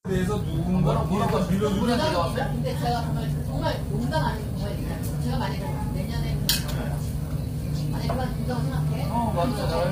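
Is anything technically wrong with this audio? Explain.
Yes, there's heavy low-delay AAC compression throughout. It's likely AAC-ELD, whose short frames resolve tonal detail poorly, and the damage fits a rate around 24 kbps. You hear a rough, grainy texture, noise filling gaps between harmonics, and a dulled or synthetic-sounding top end.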